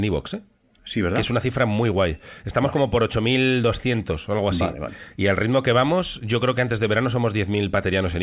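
Speech coming through a call connection, with nothing above 4 kHz as you'd expect from a G.711 line, and there's nothing technically wrong to point to here.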